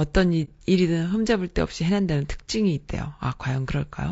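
Throughout the clip, the speech sounds rough and grainy. Noise fills the gaps between the pitch harmonics, and the top band sounds thin and synthetic. This is plainly audible codec damage, likely from low-delay AAC compression of the AAC-ELD kind used in video calls. Its short frames cannot resolve the harmonics finely, so detail is lost. The degree of damage fits a low bitrate of around 32 kbps.

From 0.44 to 0.49 s there is a brief hole in the sound. This is AAC frame loss with muting. A chunk of coded audio went missing, and the decoder replaced it with silence. The overlapping windows fade the sound out and back in, so the edges are soft. The gap of about 30 ms points to a single lost frame.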